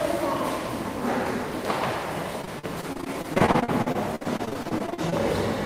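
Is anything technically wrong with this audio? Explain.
Yes, there's a run of repeated packet loss, giving that robotic sound, from about 2.41 s to 5.14 s. Over that stretch the stream keeps dropping or delaying chunks of audio, sometimes for as long as 51 ms at a time. Each hole gets papered over by stretching the last bit of sound, then another hole arrives right after. About a quarter of the span ends up filled in this way, so it comes across as choppy, with bits of the sound missing.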